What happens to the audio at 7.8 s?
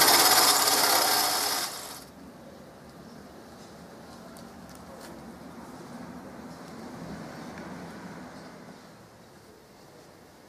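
Nothing goes wrong at 7.8 s: the audio plays straight through that moment without any dropout, click or other audible fault.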